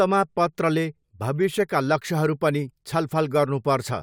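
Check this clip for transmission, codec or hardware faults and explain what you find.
Checking this clip turns up no faults to explain.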